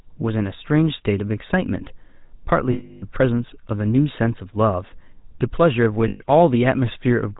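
From the start, the whole clip has that GSM full-rate codec grain: a buzzy, gravelly roughness with nothing above 4 kHz. The coder models the vocal tract and drives it with a coarse pulse excitation, and the plainly audible damage fits the old 13 kbps full-rate mode.

Then at 2.72 to 3.04 s there's a stretch of lost GSM frames, about 300 ms. The decoder keeps replaying the last good frame, so the speech hangs as a rough metallic ring. It happens again, shorter, at 6.08 to 6.23 s, about 120 ms, where the same held ring comes back.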